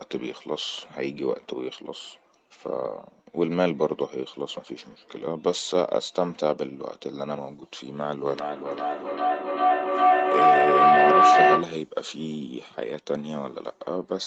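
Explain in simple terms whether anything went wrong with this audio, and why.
Feedback howl from 8.25 to 11.89 s: sound loops between microphone and loudspeaker, growing louder each trip into a whistle near 700 Hz, the loop repeating about every 0.4 s.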